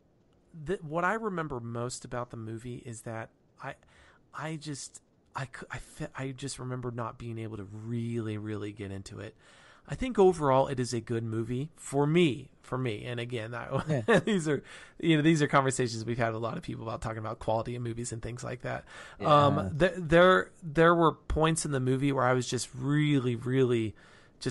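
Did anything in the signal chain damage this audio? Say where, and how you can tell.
Yes. Bluetooth LC3 compression, likely, runs throughout: the speech carries a grainy, breathy upper band, consistent with noise-filled spectrum from a 48 kbps, 7.5 ms-frame codec.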